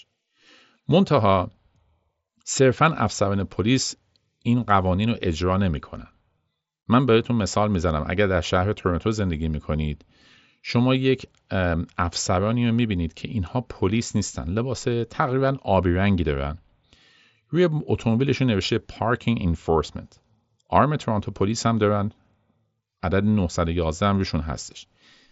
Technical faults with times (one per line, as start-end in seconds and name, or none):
none